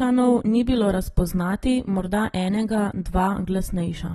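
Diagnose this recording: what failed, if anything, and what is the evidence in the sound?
The codec stage is the culprit here. The speech has nothing above 12.4 kHz from start to finish, and the damage is plainly audible as a dull, smeared, fizzy texture. That's likely AAC compression: the encoder pulled its cut-off down and starved bands, which fits AAC-LC at about 36 kbps.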